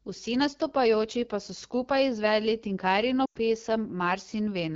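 Throughout, the speech sounds rough and raspy, with a buzzy, grainy texture and a thin top end where the highest frequencies are filled with hiss rather than detail. This is the AMR wideband (HD Voice) codec running at one of its lowest rates, which fits 8.85 kbit/s. The codec models speech up to 6.4 kHz from a pulse-driven vocal tract estimate, and at this rate there are too few bits to describe it cleanly, so the damage is plainly audible.

From about 3.26 to 3.38 s the speech drops to near silence within two frames, then resumes weak and rough for a moment. These are lost AMR speech frames: corrupted frames failed their checksum, so the decoder repeated the last good pitch and vocal tract settings while lowering the gain. The missing stretch lasts about 100 ms, which fits five consecutive lost frames. Wideband decoding fades faster than narrowband, so the sound collapses almost at once.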